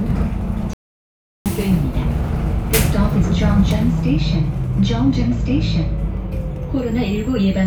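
An everyday sound recording, with one playback stall. At 0.73 s the sound cuts out in mid-flow. The output stays silent for about 0.72 s, until 1.46 s, and then the sound returns. The likely cause is the player running short of data or its thread being blocked.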